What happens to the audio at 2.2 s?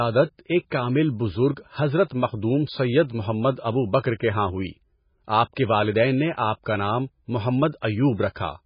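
Throughout, including 2.2 s, the speech sounds watery, with nothing above 5.1 kHz. This is likely heavy MP3 compression near 16 kbps, which cuts the treble and makes weak frequency lines flicker.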